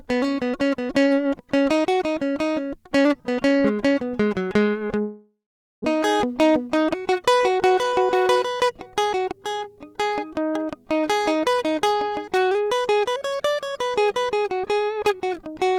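From 5.01 to 5.86 s the music decays into a fading buzz, then silence; a long network dropout likely lost 600 ms, leaving a blank waveform gap. From 7.70 to 9.39 s a jitter buffer speed-up plays the music 111% fast at unchanged pitch, trimming about a fifth of a second; spectrogram onsets bunch closer.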